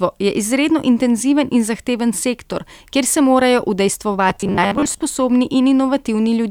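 From about 4.30 to 5.02 s the speech collapses into robotic sound from repeated short buffers: a rigid, metallic buzz pinned at 100 Hz that still loosely tracks the talking. That pitch points to a chunk of roughly 10 ms being played over and over. It's likely that new audio was arriving too slowly, so the playback side kept looping the last piece while real audio was skipped, with around half of that stretch being repeats.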